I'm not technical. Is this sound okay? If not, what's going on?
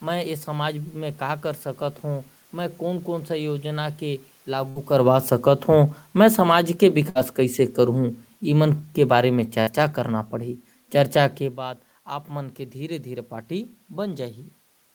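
No. Three times, at 4.69, 7.09 and 9.61 seconds, a burst of packet loss hit. Chunks of audio never arrived, so the receiver briefly stretched the last sound and faded it, and then jumped ahead, skipping a small piece of speech.

From 4.92 to 10.30 seconds, automatic gain falling occurs: the system judged the input too loud or its background too noisy and slowly turned it down, so the voice and background sink together.

Separate changes in loudness around 5 and 11.5 seconds come from the talker moving relative to the microphone.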